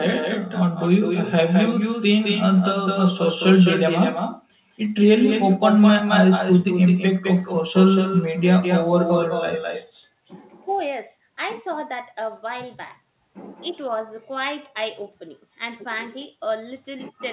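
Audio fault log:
Throughout, echo with no canceller: far-end loudspeaker reaches its microphone unremoved, so speech returns about a fifth of a second later, about 8 dB quieter.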